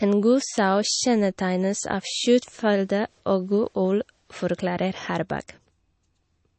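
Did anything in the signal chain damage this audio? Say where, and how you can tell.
Yes, codec stage: speech sounds watery throughout, and a spectrogram shows a hard ceiling at 8.3 kHz with flickering gaps, likely MP3 compression starved of bits.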